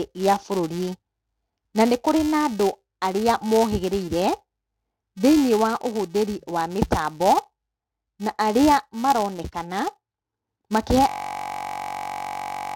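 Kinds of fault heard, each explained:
Filter restarted on every block: A filter in the chain drops its memory between processing blocks, so each block starts from silence with a small click. The clicks recur at about 345 Hz, which fits a 128-sample block. This gives a buzz across the whole speech clip that rises and falls with the level.
System hang loop: From 11.09 s to the end, the system froze while the sound hardware kept replaying one stretch of its buffer. A 21.33 ms piece loops many times at 46.9 Hz, which fits a 1024-sample buffer. It is heard as a steady buzz at the loop rate.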